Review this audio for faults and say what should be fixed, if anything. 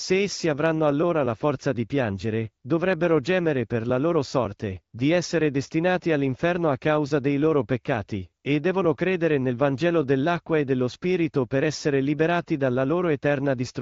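Nothing here needs fixing: the speech has passed through an AMR wideband (HD Voice) codec, which limits its bandwidth to about 7 kHz, and no fault can be heard anywhere in the signal.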